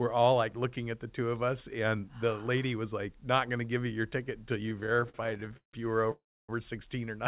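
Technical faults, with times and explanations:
4.66–5.75 s, repeated stalls (stutter): packets kept arriving late, so the jitter buffer ran dry 24 times. The receiver filled each gap by extending the last sound, 432 ms in total with the longest gap 162 ms, so the audio drags and judders. On a spectrogram, short smeared, repeated slices break up the pattern, all of it band-limited below 4 kHz.
6.11–6.51 s, call audio freeze: the last sound carries on as a fading buzz, then about 290 ms of silence follows, 373 ms inserted in all, likely because delayed packets left the jitter buffer empty. The waveform shows a decaying tail, then a flat line, before the audio resumes where it stopped.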